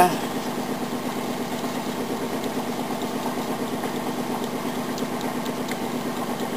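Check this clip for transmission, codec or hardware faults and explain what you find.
No fault can be heard anywhere in the clip. No point in it stands out as needing a closer listen.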